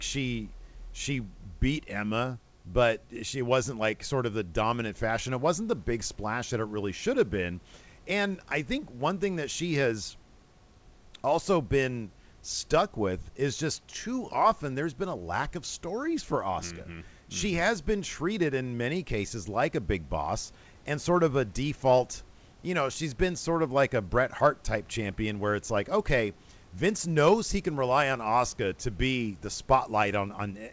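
No technical faults are audible.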